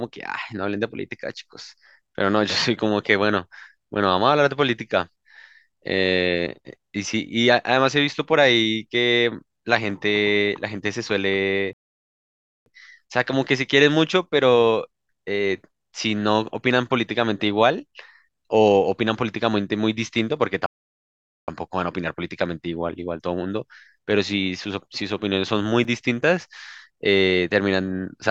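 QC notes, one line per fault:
11.73–12.66 s and 20.66–21.48 s, rebuffering stall: playback runs dry and just stops, adding about 0.93 s and then 0.82 s of silence. The player waits for more data, then picks up exactly where it left off, so nothing's missing, just dead air.
25.84 s, block of digital silence: a 5.33 ms gap of silence, which fits a 256-sample buffer not being filled in time. The sound drops out and returns with no fade, so it comes across as a quick tick rather than a hole.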